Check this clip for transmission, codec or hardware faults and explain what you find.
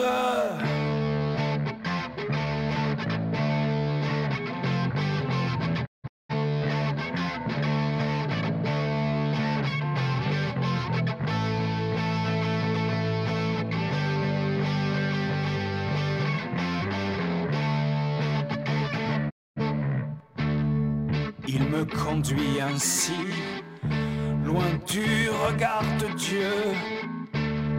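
Two digital broadcast dropouts: at 5.85 to 6.33 s, several short holes total 384 ms; at 19.29 to 19.61 s, a single 256 ms gap. Each time, the receiver lost valid frames, faded out over 20 ms and muted until good frames returned.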